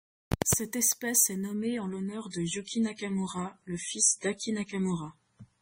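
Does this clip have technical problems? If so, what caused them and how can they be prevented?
Yes. From 1.54 s, just after "espèce est", to the end at 5.61 s, the speech turns duller and more smeared with no gap. This is an adaptive stream at a lower bitrate: a slowing connection likely made the player switch mid-stream, here from what sounds like 128 kbit/s MP3 to about 24 kbit/s. On a spectrogram, everything above 10.4 kHz cuts off abruptly at 1.54 s. To prevent it, record or capture from a local file, or set the player to a fixed high-quality stream on a stable connection.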